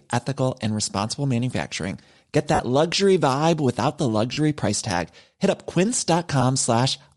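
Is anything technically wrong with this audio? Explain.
Yes. Two faults can be heard.

Throughout the speech there is a breathy, grainy edge, and the upper band looks patchy and noise-filled on a spectrogram. This is likely Bluetooth LC3 compression. Low-rate transform coding zeroes parts of the top spectrum and fills the gaps with noise. The sound points to 7.5 ms frames at around 48 kbps.

There are also three dropouts consistent with lost LE Audio frames. The first is at 2.55–2.60 s, lasting 45 ms, just before "luxury vibe without the". The second is at 4.33–4.37 s, lasting 37.5 ms, between "luxury vibe without the" and "price tag". The third is a brief one at 6.41 s, lasting 15 ms. In each case the decoder repeats the last spectrum with scrambled signs, so voiced harmonics blur into a noisy smear. On a spectrogram they show as a blotchy vertical patch, and on the waveform as a rough stretch.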